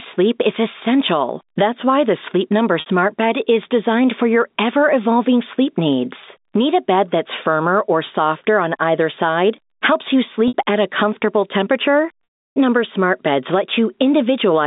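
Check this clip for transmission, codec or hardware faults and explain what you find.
Two faults are audible: gain pumping throughout, and three gaps bridged by packet loss with pitch repetition.

Gain pumping runs from start to end. The gain swings by around 10 dB. The likely cause is input gain set far too high, with a fast limiter clamping every peak. Loud and soft parts sound squashed together.

Packet loss with pitch repetition occurs at 2.80 to 2.86 s, 10.48 to 10.54 s and 12.25 to 12.56 s. The receiver repeated the last pitch period to fill each gap. The two 60 ms losses sound like a brief buzzy hold. The 320 ms loss fades to silence, then the sound returns with a short cross-fade. These lengths fit lost 20 ms packets.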